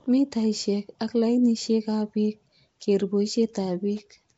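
Throughout, the speech has a rough, hissy halo and a smeared, underwater quality, with nothing above 7.7 kHz. The likely cause is Nellymoser compression: the Nellymoser Asao codec, at a rate fitting 32 kbps, starves weak bands of bits and fills them with noise.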